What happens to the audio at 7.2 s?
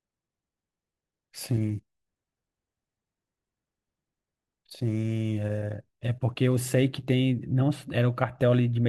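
Nothing goes wrong at 7.2 s; the speech continues intact through that moment, with no dropout, click or distortion.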